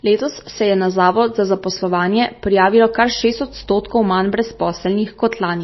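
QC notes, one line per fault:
Throughout: MP3 compression, with nothing above about 5.8 kHz and a watery, swirly edge on the speech, likely from a low bitrate around 24 kbps.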